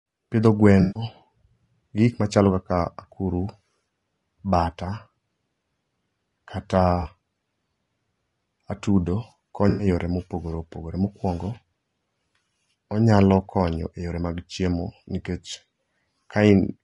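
Low-delay AAC compression throughout this speech clip, likely AAC-ELD near 32 kbps: its short frames resolve harmonics poorly, leaving the voice plainly rough and grainy. AAC frame loss with concealment at 0.81–1.03 s, 7.01–7.08 s and 9.69–9.87 s, just before "yore mopogore": the decoder rebuilds gaps of about 140, 40 and 100 ms from the last good spectrum, producing smeared, noisy patches.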